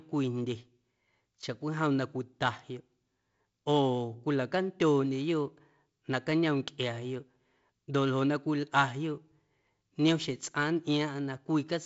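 No technical faults occur at any point in this speech.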